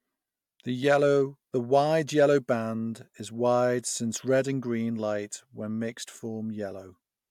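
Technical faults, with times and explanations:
Nothing stood out as a technical problem on listening to the recording.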